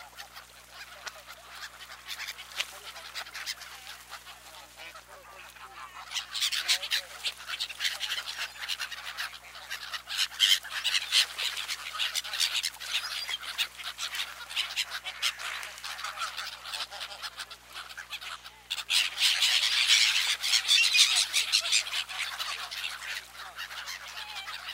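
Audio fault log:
throughout: video or display buzz, a 60 Hz buzz with hash riding above it, roughly 30 dB below the sound, from a screen or video cable coupling into the audio path at the picture's field rate. The rasping edge and hash set it apart from smoother mains hum.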